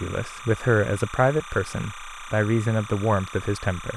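From start to finish, timecode bleed sits under the speech: a steady chirping warble, roughly 15 dB below the talker. Linear timecode from an adjacent track or cable has leaked in, its square wave flipping between tones near 1 and 2 kHz as it encodes bits at 29.97 frames per second. On a spectrogram this shows as two persistent bands around 1 and 2 kHz, plus harmonics, with a fine regular texture. The waveform carries a constant buzzy floor.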